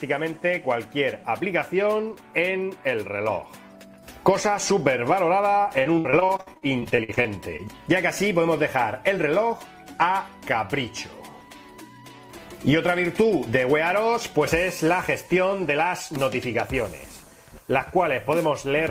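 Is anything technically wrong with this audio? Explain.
Yes, there's a burst of repeated packet loss, the robotic-sounding kind, from about 5.79 to 7.61 s. The stream keeps dropping or receiving late packets, roughly twenty short holes by ear, none longer than 62 ms. Each hole gets patched by stretching the last bit of sound, so around 28% of that stretch is filler. You hear it go choppy, with about 460 ms of actual audio simply missing.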